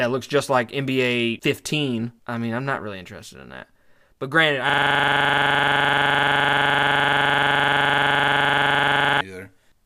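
At 4.70 s, after "granted I", a system hang loop replays one frozen 42.7 ms buffer until 9.21 s: a 23.4 Hz buzz, showing as identical repeating waveform blocks.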